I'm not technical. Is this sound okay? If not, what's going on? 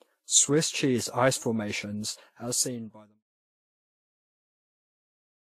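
No. All the way through, the speech has different kinds of compression damage heard together, and the top sparkle is missing: nothing sounds above about 14 kHz. This points to transcoding between lossy codecs. The recording was likely squeezed by one compression format and then saved again in another. The second format kept the first one's damage and added its own, so two kinds of blur overlap. The fade-out, starting around 2 seconds and complete by 3.24 s, is smooth, with no click.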